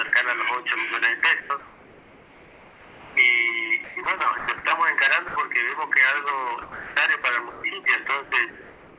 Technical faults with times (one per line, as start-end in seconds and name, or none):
1.40-1.50 sound dropped by the voice detector
1.40-3.16 comfort noise in place of the background
3.84-4.48 sound chopped by the voice detector
5.28-5.36 sound dropped by the voice detector
6.62-6.96 sound dropped by the voice detector
7.22-7.24 sound dropped by the voice detector
7.50-7.86 sound chopped by the voice detector
8.24-8.98 comfort noise in place of the background